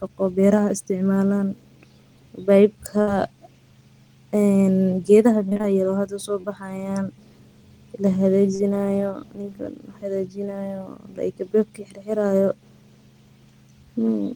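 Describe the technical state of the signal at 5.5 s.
Repeated packet loss (robotic sound) runs from 5.49 to 5.65 s: four short gaps, each patched by extending prior sound, leaving choppy speech with pieces missing rather than one clean dropout.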